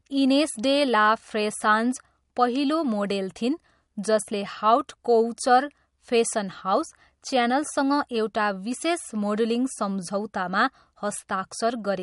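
Throughout, the speech sounds watery and swirly with nothing above 11.2 kHz, likely MP3 compression starving weak frequency lines of bits, which fits about 48 kbps.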